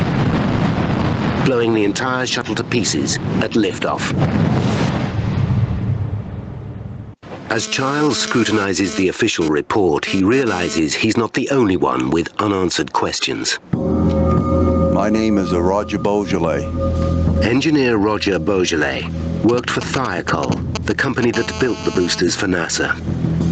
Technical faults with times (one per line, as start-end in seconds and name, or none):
0.00-23.51 gain pumping
7.56-10.79 GSM phone buzz
19.49-21.24 GSM signalling bursts
21.34-22.20 GSM phone buzz